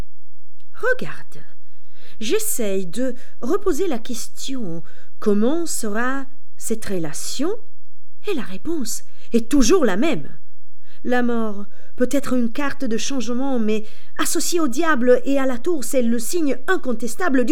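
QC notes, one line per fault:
Throughout, DC offset: nothing audible as such, but the waveform sits shifted off zero by a constant of about -14 dBFS, eating headroom and adding steady energy at 0 Hz.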